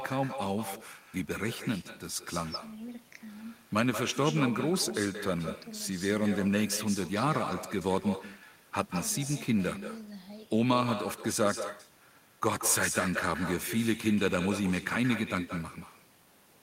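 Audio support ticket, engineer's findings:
Echo with no canceller, throughout. Far end on loudspeaker; its mic re-captures our speech and no AEC stage removes it before return. Every phrase shadowed by a copy roughly 200 ms late, about 10 dB down, thinner, lagging the speech by the full network round trip. Check far-end AEC enabled and headset or speakerphone mode.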